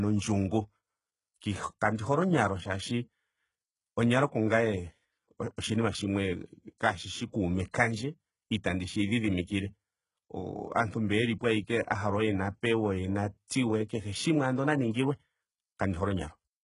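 From the start, the speech has a gritty, metallic top end with nothing above 11 kHz, most likely from heavy HE-AAC compression at a very low rate, something like 12 kbps. The treble is copied up from lower bands rather than coded, so the s sounds come out lispy and rough.

Right after "kaashishi kuume", from 7.71 to 7.74 s, there's a pre-echo: a brief hiss of about 26 ms sneaks in ahead of a sharp attack, because the codec spread its noise across the block, and the onset sounds softened and smeared.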